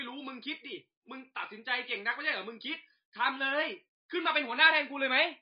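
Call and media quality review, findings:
Whole clip: MP3 compression, plainly audible. Speech sounds dull and watery, nothing above 5 kHz. Likely encoder starved of bits, fitting a bitrate near 24 kbps: treble cut, weak bands dropped frame by frame. Spectrogram: flat ceiling at 5 kHz, flickering gaps below.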